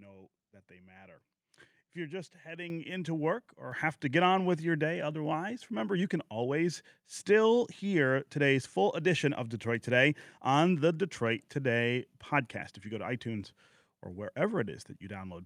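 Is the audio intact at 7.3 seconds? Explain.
Yes, the speech at 7.3 seconds is intact, with no dropout, click, distortion or other fault there.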